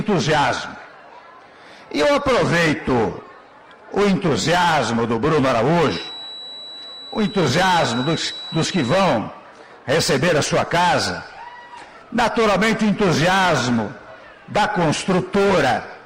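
A feedback whistle at about 3.9 kHz sits thinly under the sound from 5.79 to 9.23 s, swelling and fading slowly, most likely a speaker-to-mic loop hovering at the edge of feedback.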